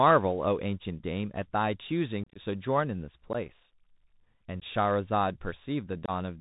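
Throughout, the speech carries the Bluetooth CVSD headset codec: a 64 kHz one-bit delta stream with an adapting step, so nothing passes above 4 kHz. Unlike a smoother narrowband codec, it has plainly audible granular hiss, scratchy s sounds, and distortion where loud high sounds outrun the step.

Unconcealed Bluetooth headset packet loss punches abrupt holes into the speech. From 2.24 to 2.39 s, about ten packets (82.5 ms in total, longest run 30 ms) vanish across 120 ms, sounding like crackly chopping. Shorter losses follow at 3.33 to 3.35 s, 4.60 s and 6.06 to 6.11 s. No concealment fills them, and the speech returns briefly quieter as the CVSD step re-adapts, which distinguishes them from plain dropouts.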